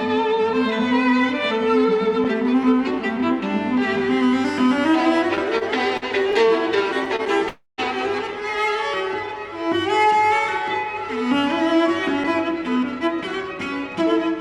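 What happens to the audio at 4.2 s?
Nothing goes wrong at 4.2 s; the audio plays through that moment intact, with no dropout, click or distortion.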